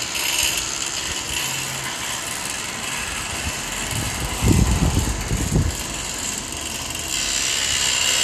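A recording of everyday sounds with no technical fault to be heard anywhere in it. There is nothing here that needs a time or a cause pointed out.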